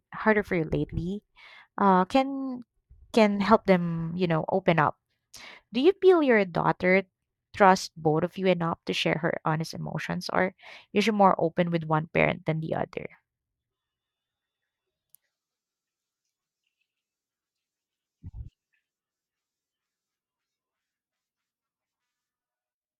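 No technical faults occur in this speech recording, so there is nothing to describe in time order.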